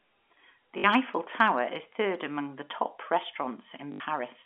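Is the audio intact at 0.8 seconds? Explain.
No. From 0.78 to 0.84 s the speech breaks up with packet loss with the last packet repeated. About 60 ms of audio never arrived, which fits three 20 ms packets, and the receiver filled the gap by replaying the final good packet. The replays don't line up with the pitch of the voice, and the run buzzes at roughly 50 Hz, a brief robotic stutter over the narrowband telephone sound.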